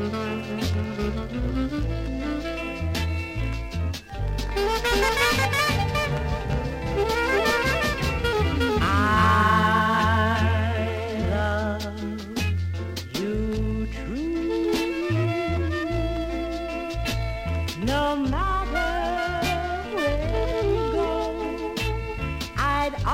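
From 4.9 s to 11.4 s a doubled audio track appears. A second full-band copy trails the original by roughly 0.4 s, at about the same level. It has no decay or room colour. It starts and stops abruptly. An out-of-step capture path is likely.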